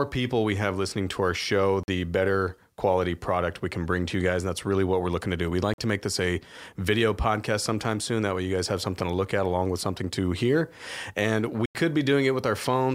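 Sample clock jitter runs through the whole speech clip from start to finish. The converter's timing wanders by roughly a microsecond or two, so each sample is captured slightly off its proper instant. The resulting error tracks how steeply the waveform is changing and sits somewhere around 40 dB below the signal. It is heard as a faint grainy hiss clinging to louder and brighter passages, falling away when the sound goes quiet.

A block of digital silence interrupts the audio at 1.83 s, lasting about 46 ms until 1.88 s, and the same thing happens again from 5.74 s to 5.78 s. In both cases the output drops straight to silence and then returns with no fade, leaving a brief hole. The length fits a 2048-sample buffer that was not filled in time. A longer gap of about 93 ms follows at 11.66 s to 11.75 s, which points to a 4096-sample block going unfilled.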